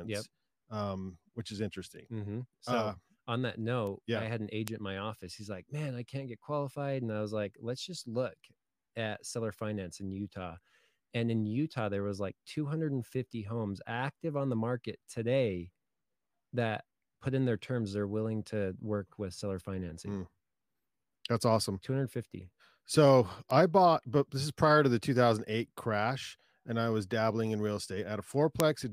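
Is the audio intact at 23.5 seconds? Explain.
No. A bit error spike hits at 23.51 s, just before "I bought but this". One flipped bit jolts a single sample to about -19 dBFS, heard as a sharp broadband tick.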